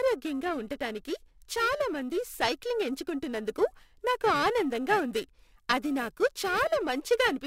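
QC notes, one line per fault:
Throughout, periodic clock jitter: the converter's sample clock is being wobbled at a steady rate of around 1 kHz, so every component of the speech picks up sidebands spaced roughly 1 kHz above and below it, strongest around the higher-frequency content such as sibilants. This gives a rough, metallic edge that disappears in pauses. On a spectrogram, paired ghost traces shadow each harmonic at that spacing; the waveform itself looks unremarkable.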